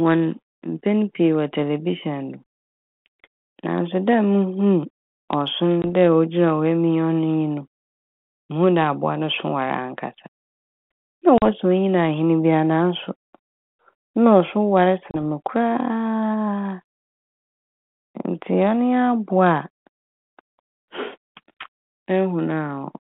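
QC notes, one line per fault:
5.82–5.85 s, 11.38–11.43 s, 15.11–15.16 s, packet loss on an ADPCM call: three hard-edged silent holes of about 20, 40 and 30 ms in the speech. On a waveform each is a flat-line gap with abrupt edges. On a spectrogram each is a clean vertical blank stripe across the 150 Hz to 3.5 kHz band of this G.726 32 kbit/s call. Just after each hole the speech returns slightly distorted. This is because the decoder's adaptive predictor and step size no longer match the sender's. The distortion settles within some tens of milliseconds.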